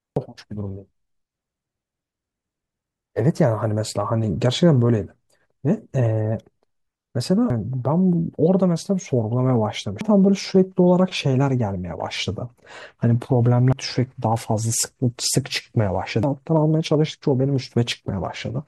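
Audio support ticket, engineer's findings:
Damaged data in a compressed stream: short glitch artefacts in speech at 0.16, 7.50, 10.01, 13.73 and 16.23 s, each momentary. Probable component is the compressed file or stream feeding the decoder. Corrupted bytes make the decoder misread frames and lose sync until the next valid header. This points to bad stream data, not the playback path.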